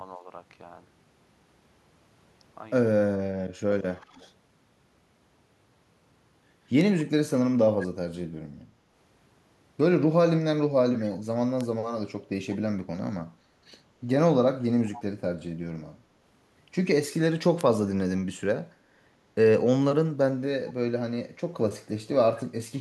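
Right at the start, from 0.17 to 0.26 s, the speech dips by only a few dB, which sounds like speech suppressed in double talk: the echo canceller was likely ducking everything while both ends talked. The same thing hits much harder from 3.1 to 3.67 s, where the level falls by something like 30 dB and the speech nearly vanishes, then lightly again from 3.97 to 4.21 s.

Overlapping that last dip, from 4.02 to 4.29 s, there's a faint echo leak, about 30 dB under the speech and trailing it by 181 ms. The far end's canceller likely didn't scrub all of its loudspeaker pickup, so a quiet delayed copy came back down the line.

At 6.81 s there's a single sharp tick, a bit error spike where a few consecutive sample values jumped by a power of two and snapped straight back. It's broadband and has nothing to do with the speech.

From 8.66 to 8.94 s there's another shallow double-talk dip of a few dB. 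The echo canceller was likely holding back the near-end speech while the other side talked over it.

A second bit error spike clicks at 11.61 s.

From 14.92 to 15.03 s the echo leak returns, again 181 ms behind the speech, now stronger at about 20 dB down, so that short delayed copy stands out more.

The last bit error spike, another brief tick, lands at 17.61 s.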